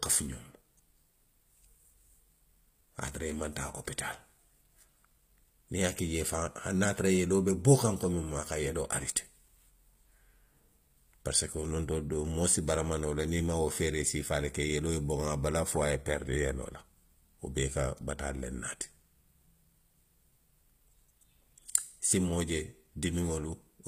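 Throughout the clip, the audio has most likely passed through HE-AAC compression at a low bitrate, one that fits something around 24 kbps. The encoder carries only the lower spectrum and rebuilds the treble by copying lower bands upward under a coarse envelope. The upper harmonics therefore fail to line up with those below the crossover, and nothing survives above 15.5 kHz. The codec damage is plainly audible, with s sounds turning gritty, metallic or lispy.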